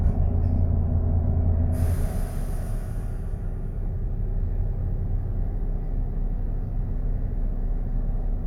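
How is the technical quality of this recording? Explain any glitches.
There is one glitch: a short stretch of repeated frames at about 0.56 to 0.62 s. A 64 ms block of compressed audio is decoded and then played once more, which fits a run of two frames being written or sent twice. You hear a brief stutter as that slice repeats, and the clip runs 64 ms longer. Unlike an echo or delay, it is an exact repeat with no decay and no added overlap.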